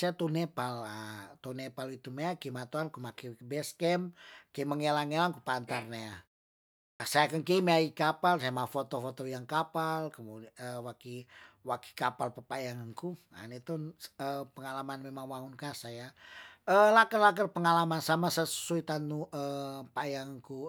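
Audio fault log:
6.8 to 7.0 s, clipped start after a pause: the sound bursts in abruptly out of silence with its opening missing, about 200 ms swallowed after a 0.6 s pause, because the output device dropped into sleep during the quiet and needed time to wake before playing again.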